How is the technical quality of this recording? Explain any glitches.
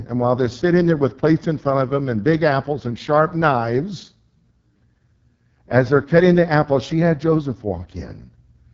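The technical quality is poor: the speech has been through heavy AMR wideband (HD Voice) codec coding throughout. Nothing is present above 7.4 kHz, and the voice sounds rough and raspy. That harshness fits the lowest AMR-WB mode, around 6.6 kbit/s, where the pulse-driven vocal tract model has too few bits to follow the voice. The top band is filled only with shaped noise. Unlike narrowband phone audio, the sound reaches well past 3.4 kHz.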